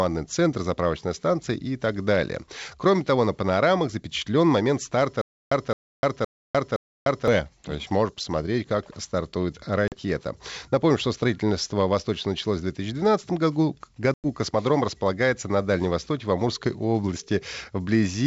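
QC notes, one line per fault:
5.21–7.28 s, stutter with silent gaps: the stream likely stalled and, at each retry, replayed its last fragment before running dry. A 0.22 s burst repeats four times, each followed by 0.3 s of digital silence, on a steady 0.52 s cycle, and the audio meant for that stretch is lost.
9.88–9.97 s and 14.14–14.27 s, packet loss on an ADPCM call: dropped packets were filled with silence, leaving holes of 40 ms and 100 ms, roughly two and five 20 ms packets. The decoder's predictor and step size then lost track of the sender's. Each hard-edged gap is followed by slightly distorted speech until it resettles.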